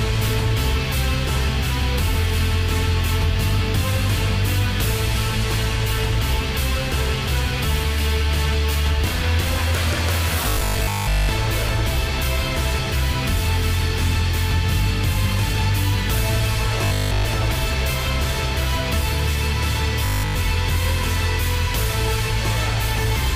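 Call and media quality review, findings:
Robotic sound from repeated short buffers at 10.49–11.29 s, 16.85–17.25 s and 20.05–20.37 s. Rigid, metallic 50 Hz buzz only roughly tracking the original. Most of the first window is repeated; essentially all of the other two. Likely cause: playback underrun, the last 20 ms of audio looped while real audio is skipped. Unlike a steady mains hum, the 50 Hz buzz appears only within these windows.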